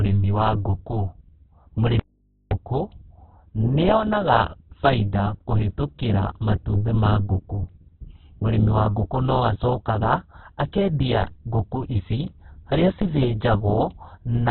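Throughout, the speech sounds narrow, rough and grainy, with nothing above about 4.5 kHz. This fits heavy Opus compression in its music (CELT) mode, likely at a very low bitrate near 8 kbps. A spectrogram shows a hard ceiling and smeared, noisy band textures.

From 2.00 s to 2.51 s the speech cuts out abruptly for about half a second, leaving only mains hum roughly 45 dB below the signal. This is an audio dropout to a faint residue. The waveform collapses to a thin hum trace, and a spectrogram shows only its low harmonic lines.

At 11.23 s and again at 13.02 s, the waveform's zero line jumps. Each DC step is heard as a low thump while the speech continues. The offset then decays away through a 20 Hz high-pass, so the waveform shows a sudden shift easing back toward centre.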